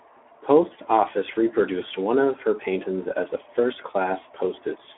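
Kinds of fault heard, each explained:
Speex codec, throughout: a CELP speech coder left with too few bits to model the excitation, so the speech sounds plainly hoarse and grainy, which fits a rate near 11 kbps, and it is held to a narrow 300 Hz to 3.4 kHz band.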